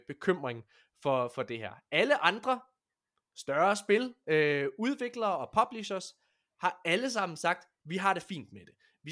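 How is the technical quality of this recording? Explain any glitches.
No glitches or faults detected.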